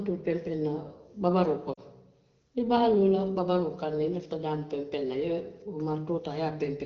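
At 1.73 to 1.80 s, lost AMR speech frames cut into the speech for about 40 ms, which fits two 20 ms frames. The decoder repeated its last good settings with falling gain. The speech briefly smears and dips, then returns weak or rough for a moment over the light AMR-WB coding.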